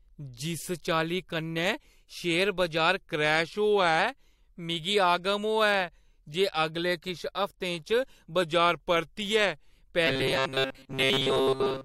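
From 2.98 to 3.99 s and again from 8.42 to 9.72 s the speech slows by about 5.9% and drops about a semitone, then snaps back. This is likely a drift correction step. Pitch and tempo move together, so it is not a pitch-only glitch.

From 10.07 s to the end, a rigid metallic buzz at 133 Hz is imposed on the voice. This is robotic sound from repeated short buffers, likely caused by a roughly 7.5 ms block being looped while most of the real audio is skipped. Unlike codec warble, its pitch stays fixed.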